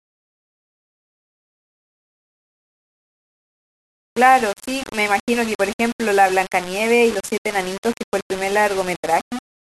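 Low bit depth without dither runs throughout this speech clip, heard as grainy distortion that tracks the sound, gritty in quieter passages and sputtering or dropping out at the softest. It likely comes from undithered rounding to about 5 bits, leaving error roughly 15 dB below the signal.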